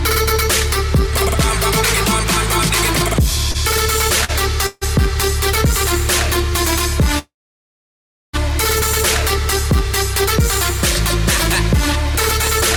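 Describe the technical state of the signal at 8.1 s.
A call audio freeze runs from 7.19 to 8.35 s, so at 8.1 s the signal is silent. The jitter buffer likely ran empty while packets were held up. A short fading continuation gives way to about 1 s of silence, then the audio resumes intact, 1.15 s late.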